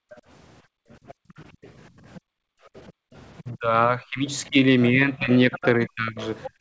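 From the start to 3.13 s the room background keeps dipping and vanishing, falling by about 40 dB at its deepest and missing for roughly a second and a half in total. This is background gated by the echo canceller, which clamped the microphone while the loudspeaker was playing.

Overlapping this, from 0.1 s to 4.47 s, a faint second voice sits well beneath the talker. It is likely the other side's voice leaking through, loudspeaker sound that the echo canceller failed to remove fully from the microphone pickup.

From 3.42 s to the end at 6.60 s the talker's own level sags markedly, sometimes thinning and breaking into pieces. This is likely speech suppressed in double talk: with both sides active, the canceller could not separate talker from echo and turned everything down.

From 5.52 s to the end the second voice returns, noticeably louder than before but still under the talker. This is likely again the other side's voice leaking through, with the residual echo escaping cancellation during the overlap.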